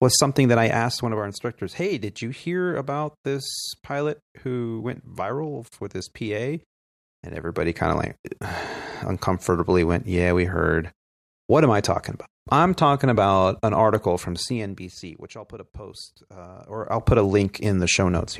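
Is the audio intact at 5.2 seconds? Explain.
Yes, the speech at 5.2 seconds is intact, with no fault present at that moment.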